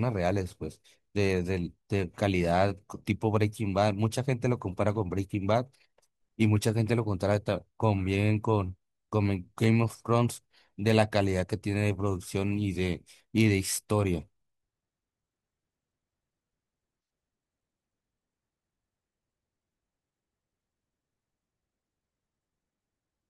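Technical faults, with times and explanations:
No technical faults can be heard anywhere in this recording.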